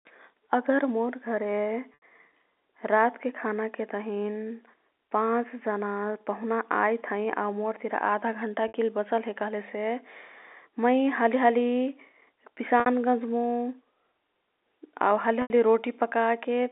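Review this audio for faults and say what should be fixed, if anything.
Four brief spots where the sound freezes into a held, buzzy tone that thins out before the speech cross-fades back: 1.94–2.02 s (80 ms), 8.68–8.74 s (60 ms, between "मोर् तिरा आधा घण्टा" and "किल बचल हे"), 12.80–12.86 s (60 ms) and 15.42–15.50 s (80 ms). This is packet loss with pitch repetition. The receiver loops the last pitch cycle to cover the missing audio and fades it out. The gap lengths fit runs of three or four 20 ms packets. Forward error correction or a deeper jitter buffer on the link would prevent these dropouts.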